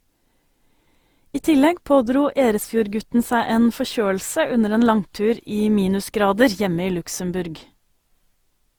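Generation loss runs through the whole speech clip: the sound is swirly and hollow, with smeared, blurred consonant attacks and content reaching up to about 20.2 kHz. The cause is likely repeated lossy re-encoding, roughly seven passes, with a character that fits Opus at 64 kbit/s. Each decode and re-encode quantises again on a shifted frame grid, so noise piles up beyond what that bitrate alone would produce.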